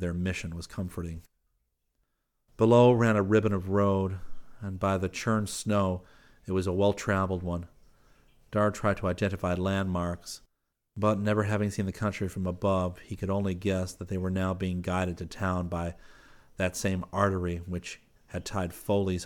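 No technical faults can be heard in the speech, and the signal stays steady throughout.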